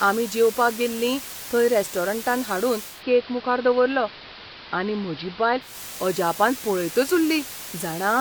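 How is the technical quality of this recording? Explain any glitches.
The recording has two clear faults: a constant hiss across the whole clip, and a stretch where the broadcast drops to an analogue signal.

Low bit depth with dither runs throughout. The signal has been reduced to only 5 bits, with dither added before rounding, so the quantisation error is spread into steady white noise rather than distortion. The result is an even, unchanging hiss, only around 15 dB below the speech, sitting under every word with no grittiness or crackle.

Digital radio blending to analogue occurs from 2.83 s to 5.81 s, beginning just after "गेल्लीं थंय रेस्टॉरंटान हाडून" and returning just before "अजापान पळयतच". The receiver lost the digital stream and cross-faded, over about 0.2 s, to the station's AM broadcast, then faded back. During that stretch a faint extra hiss, roughly 40 dB down, appears. The level stays the same.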